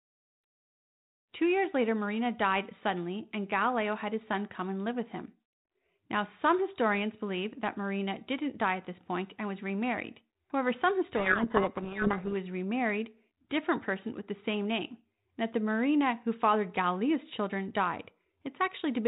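From 11.16 to 12.33 s, just before "was remarried different person", the speech is buried in harsh distortion for about 1.2 seconds. This is a codec payload misread: the two ends disagree on the bit order of the G.726 code words, so the decoder takes each ADPCM difference value with its bits in the wrong places and rebuilds the wrong waveform. It clears once both sides read the format the same way again. Around it, the 32 kbit/s G.726 coding carries only light codec damage.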